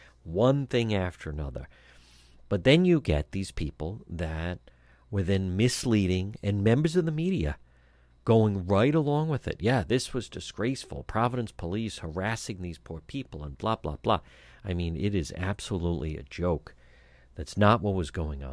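No technical faults can be heard anywhere in this speech clip.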